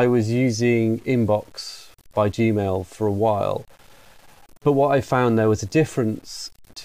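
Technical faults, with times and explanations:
Throughout: low bit depth without dither, likely 8-bit truncation; quiet speech turns gritty, with signal-following noise roughly 35 dB down.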